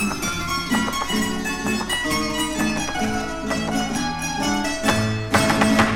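Nothing goes wrong anywhere in this one; the audio just runs along from the first moment to the last without a single glitch to point at.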